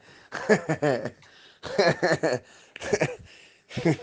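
Nothing goes wrong anywhere in this audio; there's simply nothing here to flag.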